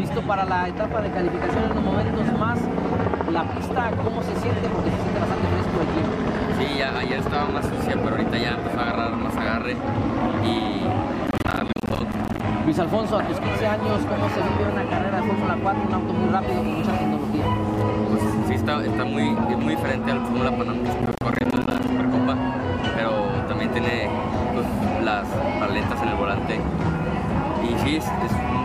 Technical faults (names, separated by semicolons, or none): processor overload crackle